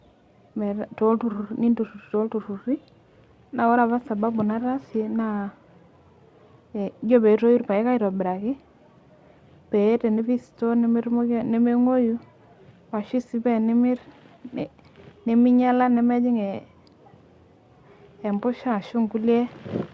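No technical faults can be heard in this recording.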